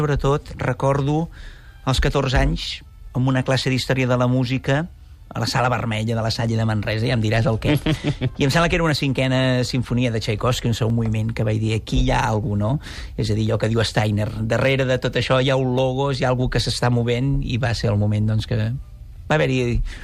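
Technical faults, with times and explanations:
5.22, 6.47, 10.90, 13.47 and 15.78 s: dropped samples. Each of these five moments is a single sharp click, a thin vertical line across the spectrum, most likely from a fraction of a millisecond of samples missing from the stream. With that sliver gone, the waveform leaps straight from one value to a later one, and the abrupt step is heard as a click. The gap is far too short to remove any audible sound.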